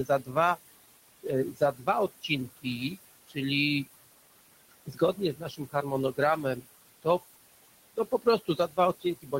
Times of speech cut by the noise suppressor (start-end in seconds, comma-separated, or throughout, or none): 1.52-1.88, 4.71-5.75, 7.97-8.78, 9.22-9.33